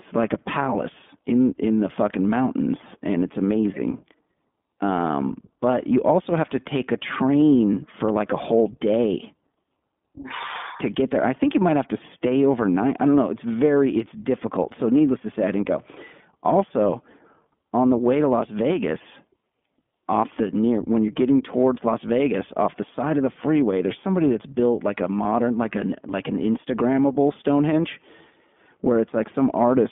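Speech carried through the iLBC codec for its whole length, band-limited to about 200 Hz to 3.5 kHz with a rough, synthetic edge from frame-by-frame excitation coding, consistent with the 15.2 kbps, 20 ms mode. A spectrogram shows nothing above 3.5 kHz and smeared, blocky harmonics.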